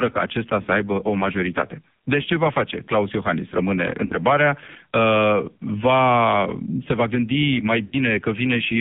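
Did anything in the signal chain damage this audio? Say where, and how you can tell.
Yes. AMR narrowband mobile codec, throughout, at the codec stage: sound is confined to 150 Hz to 3.6 kHz and heavily buzzy and synthetic, which fits AMR-NB at a low bitrate near 5.9 kbps.

Lost AMR speech frames at 0.62 to 0.66 s, 4.06 to 4.13 s and 7.86 to 7.96 s, a network-stage fault. The decoder repeated its last parameters with fading gain, giving warbling dips of 40, 70 and 100 ms, consistent with one, two and three missing frames.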